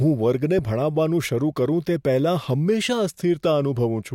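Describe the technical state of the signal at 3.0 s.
At 3.0 s the speech signal is intact, with no audible fault at that point.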